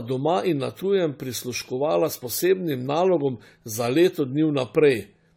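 From start to finish the speech has a swirly, hollow, smeared quality, with blurred consonant attacks and nothing above 19.5 kHz. That's likely generation loss: AAC-LC re-encoded roughly five times, each pass stacking fresh quantisation noise, and the sound is worse than 64 kbit/s alone would explain.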